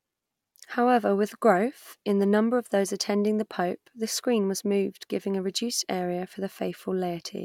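A short stretch of speech, and there's nothing technically wrong to point to anywhere in it.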